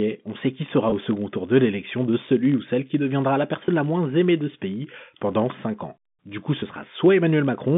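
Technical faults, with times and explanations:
Throughout: filter restarted on every block. A steady low buzz near 46.9 Hz rides under the speech and swells and fades with its loudness. A filter drops its memory at each block boundary and restarts from silence, leaving a tiny transient every block, which fits a 1024-sample block size.
0.90 to 0.92 s, 3.67 s and 6.60 to 6.62 s: packet loss with pitch repetition. Each spot has a brief, slightly held buzzy tone lasting about 20 ms. One packet went missing each time, and the receiver covered the hole by repeating the last pitch period.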